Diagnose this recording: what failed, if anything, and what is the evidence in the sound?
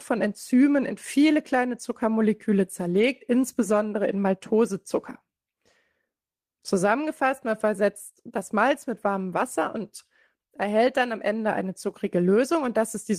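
Lost packet rebuilt from error correction, 2.93 to 3.07 s, at the network stage with recovery in the codec. The speech does not drop out, but for that short stretch it turns rougher and noisier, a grainy patch rather than a silence. That fits about 80 ms of audio, roughly four packets' worth, going missing in transit. The decoder played the low-bitrate backup copies carried inside the packets that followed, so the gap was filled with coarser speech.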